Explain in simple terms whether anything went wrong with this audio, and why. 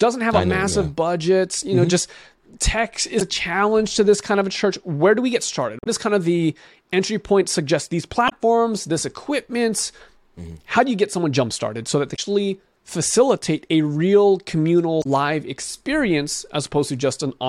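Something did go wrong. The speech is broken five times by short blips, at 3.18 to 3.22, 5.79 to 5.87, 8.26 to 8.33, 12.12 to 12.19 and 15.00 to 15.06 seconds. This is damaged data in a compressed stream. Bad bytes confused the decoder, and it lost its place briefly.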